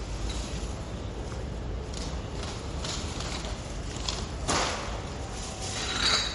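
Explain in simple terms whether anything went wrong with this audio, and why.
The whole clip sounds dull and watery, with nothing above 11.2 kHz, pointing to heavy compression, likely MP3 compression throwing away treble and faint detail.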